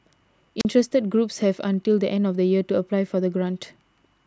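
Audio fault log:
0.59–0.65 s, wireless microphone squelch dropout: a brief swell of hiss, then a gap of near silence lasting about 39 ms before the speech comes back. The microphone's radio signal faded far enough that the receiver's squelch shut the output off.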